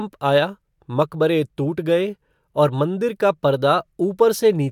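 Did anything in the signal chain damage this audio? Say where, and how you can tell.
No, no signal-chain damage heard.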